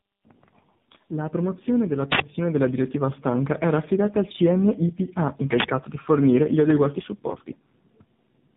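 Tandem speech coding runs through the whole speech clip: the sound is rough, muffled and warbly, with nothing above 3.8 kHz, and the character points to two low-rate speech coders in a row, consistent with GSM full rate and then AMR-NB at around 7.4 kbit/s, with a plain G.711 link between them. The second coder has to model audio already smeared by the first, so their errors stack and sound worse than either alone. An uninitialised buffer breaks in twice, from 2.12 to 2.20 s and from 5.60 to 5.64 s, as short, loud bursts of harsh digital noise lasting 80 ms and 40 ms. Each time, a playback block was sent out before real audio had been written into it, so whatever stale memory it held was played as if it were samples.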